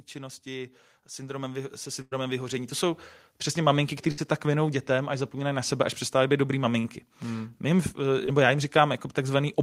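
From 0.16 s to about 3.10 s the speech and the background swell together by about 11 dB. This is automatic gain rising: the level control judged the input too quiet and raised its gain over nearly three seconds, settling just before "přesně maminky". Because the noise floor climbs in step with the voice, it is clearly a gain change rather than someone moving closer or speaking louder.

During that rise, at 2.01 to 2.13 s, comes a burst of packet loss. About 100 ms of audio never arrived, and the receiver continued the last sound and faded it down before jumping ahead with that stretch missing. A second, shorter burst at 4.11 to 4.19 s drops about 60 ms the same way. The continued sound that dies away and the skip forward set these apart from a simple dropout to silence.

Short concealed packet loss follows at 6.79 to 6.86 s, just after "až přestávají být dobrý", where about 40 ms was lost. 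Another comes at 8.26 to 8.29 s, about 20 ms, just before "já jim". Here the gaps are brief enough that the filled-in sound blends straight back into the real audio. Each is heard only as a quick smear or wobble, which distinguishes them from the longer bursts.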